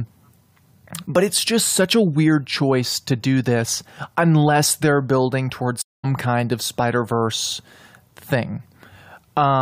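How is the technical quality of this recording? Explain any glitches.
There's one glitch, a stream reconnect at 5.82 to 6.05 s. Right after "unless they're building towards" the speech cuts to about 0.22 s of silence. The connection broke, the player restarted its decoder mid-stream, and it rejoins roughly a fifth of a second further on, at "kind of".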